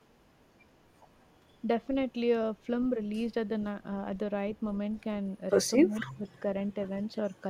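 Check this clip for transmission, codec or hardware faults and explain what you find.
Two faults turn up near the end, both pointing to an echo canceller struggling on a hands-free call.

From 5.76 to 6.27 s the speech dips sharply, by around 20 dB at its deepest, with roughly four tenths of a second affected in patches. This is likely speech suppressed in double talk: with both ends talking at once, the canceller could not tell the local talker from loudspeaker echo and turned everything down.

From 6.01 to 6.11 s, inside that dip, a brief echo leak appears. The loudspeaker side's canceller left part of its loudspeaker pickup in place and sent it back, producing a faint copy of the speech delayed by 230 ms. It sits far below the live voice, about 25 dB down, and is heard as a short, ghostly scrap.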